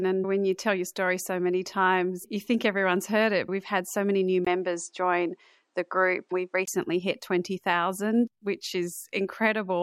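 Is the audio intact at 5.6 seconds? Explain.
No. From 4.45 to 6.68 s the speech passes through an input switched to a poorer device, likely the system changing to another microphone mid-recording. A gap of about 20 ms marks the switch at 4.45 s. The level holds steady, but the sound turns duller because the new path passes nothing above 9.8 kHz, and it brings its own faint background noise. At 6.68 s the fuller sound returns.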